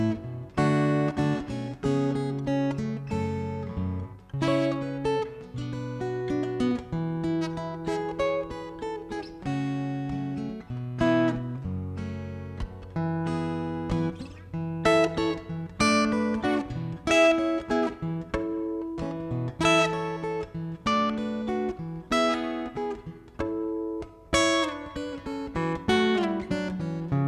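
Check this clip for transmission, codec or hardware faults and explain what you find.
No transmission, codec or hardware faults turn up in this clip.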